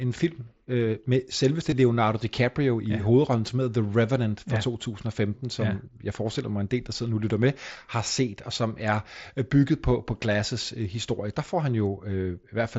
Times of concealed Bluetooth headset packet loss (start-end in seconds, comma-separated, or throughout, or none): 1.71, 7.76